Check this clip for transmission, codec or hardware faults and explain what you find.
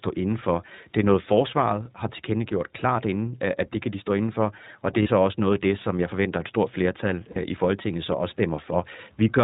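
Two faults are audible: iLBC codec coloration throughout the speech, and two brief dropouts concealed by the decoder.

iLBC codec: Throughout, the voice sounds band-limited, slightly rough and synthetic, with nothing above 4 kHz. The damage is plainly audible, consistent with narrowband iLBC coding, probably the 15.2 kbps, 20 ms frame mode.

Lost iLBC frames: From 5.02 to 5.09 s and from 7.32 to 7.38 s, the speech briefly turns into a held, faintly buzzy vowel. Each gap lasts about 40 ms, which fits two missing 20 ms frames. In each gap the decoder repeats the last pitch cycle mixed with noise. Clean speech returns almost immediately because each iLBC frame decodes independently.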